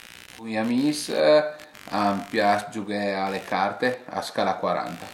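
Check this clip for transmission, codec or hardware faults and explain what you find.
One hardware fault runs through the whole recording: computer activity noise. From start to end, a buzzy, scratchy chatter of around 70 pulses per second sits roughly 25 dB below the speech. Processor and graphics load changes disturb the ground shared with the audio circuit, so the noise follows the machine's activity, not the talker. On a spectrogram it shows as comb-like harmonic striations and vertical ticks, persisting through pauses.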